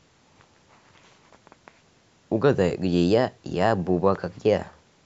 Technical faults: none

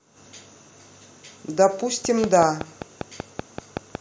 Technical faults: train of clicks

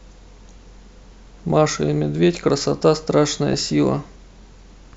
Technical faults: DAB burbling

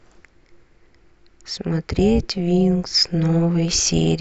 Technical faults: overlap-add ripple; clock slip clicks

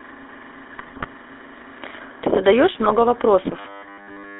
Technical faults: GSM full-rate codec; GSM bit errors

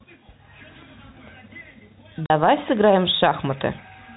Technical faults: packet loss filled with silence

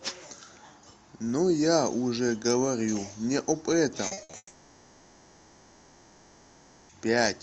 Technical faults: repeated packet loss (robotic sound); long network dropout

